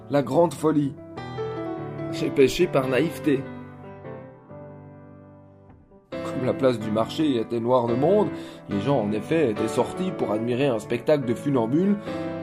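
No technical faults can be heard anywhere in the audio; the signal holds steady throughout without any audible defect.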